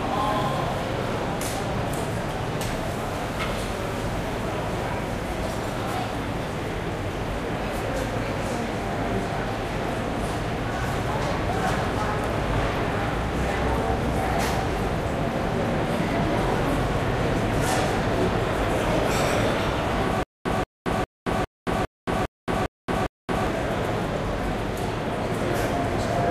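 From 20.23 to 23.47 s there is stutter with silent gaps. A 180 ms burst repeats eight times, each followed by 224 ms of silence. The likely cause is a stalled stream replaying its last fragment.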